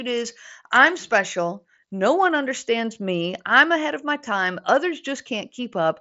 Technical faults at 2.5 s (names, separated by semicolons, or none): none